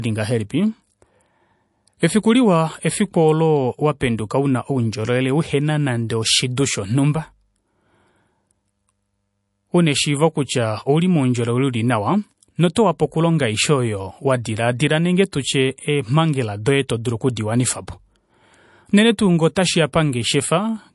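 Speech with MP3 compression throughout, likely from a low bitrate around 48 kbps: nothing above 11.3 kHz, and watery, swirling artefacts mark it apart from a plain low-pass filter.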